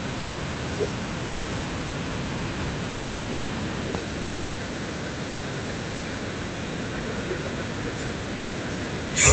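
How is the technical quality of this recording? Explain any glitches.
The recording comes through a call path with content above about 8 kHz absent, and it has repeated brief dropouts from the voice detector at 0.19–0.37, 1.27–1.45, 1.87–1.93, 2.89–3.49, 4.21–4.57, 5.29–5.41, 5.95–6.01 and 8.35–8.53 s. Each lasts 60 to 600 ms. Speech gives way to steady comfort noise, likely because the sender's voice detector misjudged the sound as background and paused transmission.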